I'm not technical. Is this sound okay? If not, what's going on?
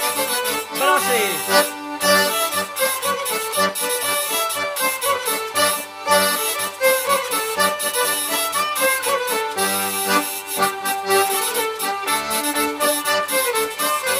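Yes, nothing in it stood out as a problem on listening.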